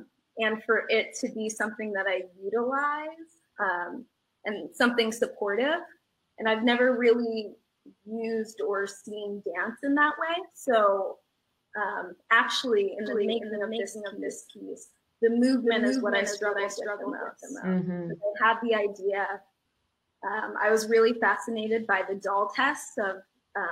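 From 13.06 to 17.74 s, a second, slower capture path likely mixes the audio back in: a doubled audio track, its dry copy trailing by roughly 0.4 s and about 5 dB quieter, starting and stopping abruptly.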